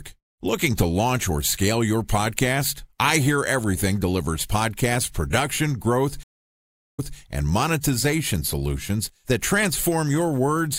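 At 6.23 s the speech drops out for about 0.75 s, then resumes at 7.16 s about 0.18 s earlier than where it stopped, briefly replaying a moment already heard. This is a stream reconnect: the connection broke, the player reconnected, and a fresh decoder restarted mid-stream from resent data.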